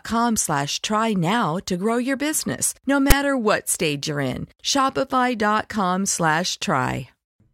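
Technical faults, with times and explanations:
3.10 s: file tags played as audio. A very short, hard-edged burst of static interrupts the speech. A block of text metadata was decoded as though it were sample data, so its character bytes became waveform values. Because text bytes sit in a narrow, mostly positive range, the result is a loud rasp pushed off-centre with a strong DC offset rather than balanced noise. The abrupt start and stop mark the edges of the tag block.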